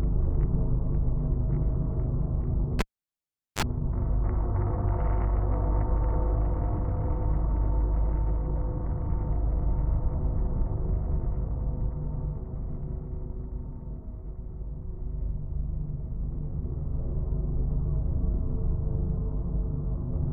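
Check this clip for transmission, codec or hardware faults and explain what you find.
One hardware fault is present. From 2.79 to 3.63 s, a cable pulled and plugged in: a pop, 0.78 s near-silent gap, then 42 ms of 50 Hz mains buzz before a second pop. The waveform shows spikes framing a flat gap, and the spectrogram shows vertical broadband lines plus a brief 50 Hz harmonic comb.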